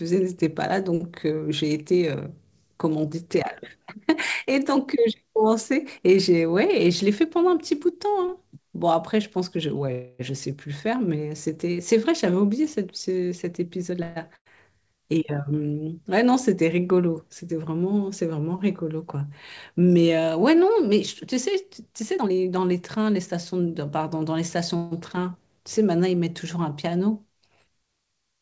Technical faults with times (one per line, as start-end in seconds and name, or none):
9.92-10.21 call audio freeze
13.90-14.02 jitter buffer speed-up
14.03-14.18 call audio freeze
14.36-14.47 burst of packet loss
22.17-23.93 jitter buffer speed-up
24.76-24.93 call audio freeze